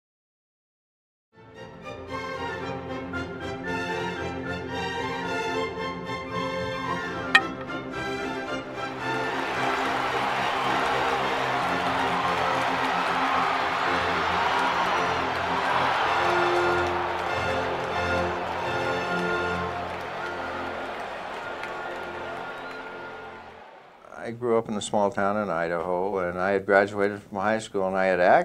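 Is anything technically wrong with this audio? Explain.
No, nothing technically wrong can be heard in this audio. No dropouts, distortion, timing problems or other faults appear anywhere in it.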